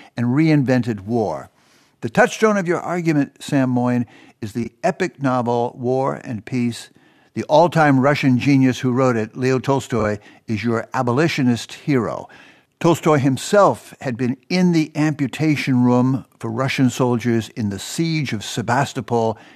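Speech clip with two brief frames-out-of-order faults, at 4.63 to 4.69 s and 9.99 to 10.04 s. In each, two adjacent blocks of about 23.2 ms play in swapped order, which points to single codec frames being exchanged. The result is a short garbled flutter. No time is lost.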